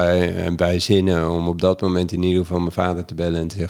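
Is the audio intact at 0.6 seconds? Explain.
Yes, at 0.6 seconds the speech is intact, with no fault audible at that moment.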